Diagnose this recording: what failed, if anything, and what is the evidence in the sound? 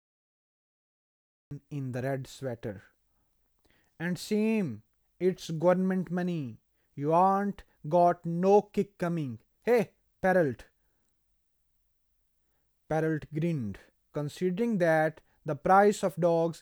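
Cut-off start at capture: digital silence until 1.51 s, then speech begins mid-sound with no attack. Unlike a dropout, the gap only opens the recording; capture started late.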